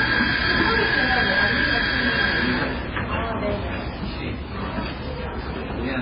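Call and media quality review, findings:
Watery, swirling texture across the whole clip, smeared attacks, dull top with nothing above 5.2 kHz. Likely MP3 compression, heavy damage fitting a bitrate near 16 kbps: encoder cuts treble, zeroes weak frequency lines that flicker frame to frame.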